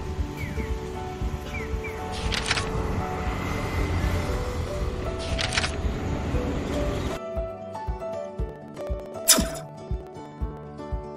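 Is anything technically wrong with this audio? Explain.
Yes. From 8.49 to 10.63 s, periodic USB or driver dropouts occur: a background task stalls the audio path every 63 ms, skipping roughly a millisecond each time, which produces a steady train of ticks.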